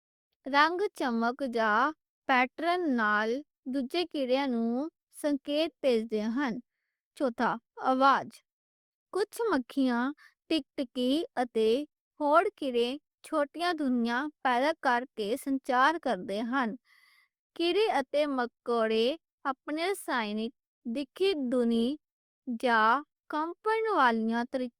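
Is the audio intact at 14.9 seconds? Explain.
Yes, at 14.9 seconds the speech plays through cleanly with no audible fault.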